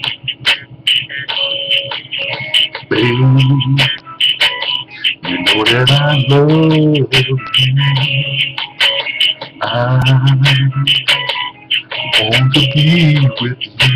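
A repeated buffer at 10.02 s gives a brief buzzy click. The same 1.33 ms slice, consistent with a 64-sample buffer, replays four extra times, shown as identical waveform cycles and a thin vertical stripe on a spectrogram.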